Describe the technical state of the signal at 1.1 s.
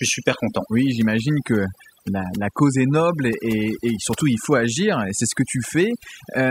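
At 1.1 s the speech carries overdone noise removal, present throughout: bands near the noise estimate are gated off, leaving a lowered background broken up into twinkling specks.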